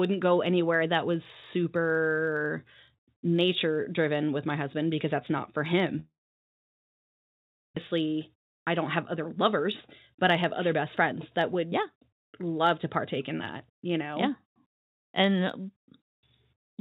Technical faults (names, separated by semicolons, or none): block size mismatch (truncated); long network dropout; jitter buffer speed-up